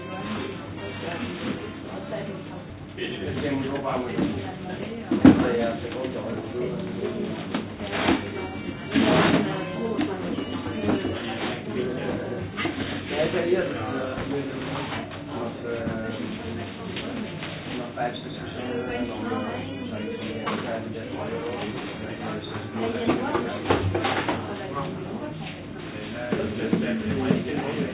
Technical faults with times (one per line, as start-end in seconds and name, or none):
2.70-2.72 skip ahead
3.81-5.20 jitter buffer speed-up